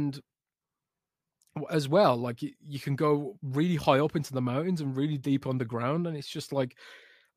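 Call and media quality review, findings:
No findings from the call and media quality review.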